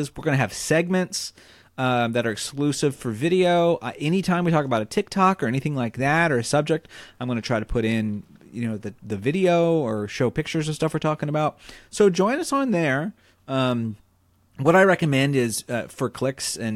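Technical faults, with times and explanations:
Nothing in this speech recording stood out as a technical problem on listening.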